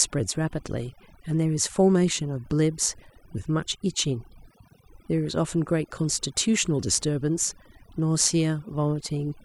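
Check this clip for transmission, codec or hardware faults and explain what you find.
One fault is present: overdone noise removal, running through the whole speech clip. A noise reduction stage was set far too aggressively, cutting individual frequency bands whenever their level sat close to its noise estimate, so softer speech components were removed along with the noise. The pauses drop to near silence dotted with twinkling specks.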